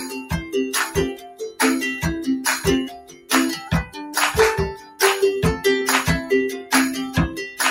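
A noise suppressor applied to music or sounds runs through the whole clip, treating sustained, steady material as noise and pulling it down by swings of around 15 dB. Held tones and decays sink while attacks pass, so the level pumps and thins. Sound cut by the noise suppressor shows up at 0.00–0.55 s, 0.89–1.59 s, 2.88–3.31 s and 4.74–5.00 s, with dips of about 10, 15, 15 and 11 dB. In these stretches, steady or fading parts drop away or have their tails cut short.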